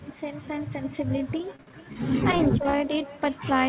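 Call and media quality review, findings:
Call and media quality review, findings:

Overlap-add ripple, whole clip: metallic buzz on the speech, with level swinging about 6 dB at a frame rate of around 300 Hz. Likely a resynthesis stage whose window overlap doesn't sum flat. Waveform shows regular envelope scalloping; spectrogram shows fine vertical banding.

Echo with no canceller, throughout: a thin second copy of the speech trails each phrase by around 300 ms, about 20 dB below the direct signal. The far-end loudspeaker is leaking into its microphone uncancelled. Spectrogram shows faint, delayed duplicates of each syllable's harmonics.

Repeated packet loss (robotic sound), 1.56 to 2.77 s: choppy speech. Nine concealment holes are spread across the span, the longest 59 ms, with about 18% of the stretch patched by extended sound. The jitter buffer or network dropped packets repeatedly. 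Spectrogram shows smeared, frozen harmonics and brief dropouts. Energy stops at 4 kHz, as expected for the G.711 path.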